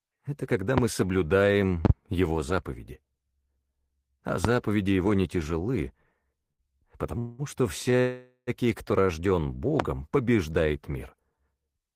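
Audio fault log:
0.78, 1.85 to 1.92 (a double pop), 4.45 and 9.80 s: loud pop, likely a voltage spike, about 20 dB above the sound. On a waveform each shows as a tall, narrow vertical spike, and on a spectrogram as a thin broadband stripe.
7.18 to 7.42 s: call audio freeze. The jitter buffer ran empty, likely from delayed packets, so about 0.2 s of held buzz is inserted and the timeline is delayed. On a spectrogram this appears as smeared, static horizontal bands.
7.91 to 7.95 s: short stall from a late packet. The last sound is stretched by 16 ms, heard as a brief buzzy hold. On a spectrogram it shows as a short frozen slice of steady bands.
8.00 to 8.50 s: call audio freeze. A longer buffer underrun, likely from held-up packets, inserts about 0.47 s of fading buzz that ends in 50 ms of silence. On the waveform the level tapers to a flat line.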